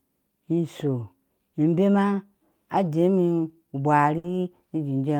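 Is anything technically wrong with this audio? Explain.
Yes. At 4.18 to 4.27 s, a short stall from a late packet occurs: the jitter buffer ran dry, so the receiver stretched the last sound about 60 ms, holding it unnaturally with a slight buzz or dip, then resumed without losing anything.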